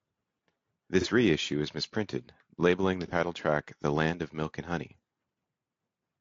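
Throughout the clip the speech sounds rough and grainy, with noise filling the gaps between pitch harmonics and a top band that sounds synthetic. The cause is likely low-delay AAC compression (AAC-ELD), whose short frames resolve harmonics poorly. The damage is plainly audible and fits a bitrate of around 32 kbps.

At 1.01–1.06 s and again at 3.08–3.12 s, a brief smeared, noisy patch interrupts the speech. Each is AAC frame loss with concealment. A single frame of about 30 ms went missing, and the decoder filled the gap by rebuilding it from the last good spectrum.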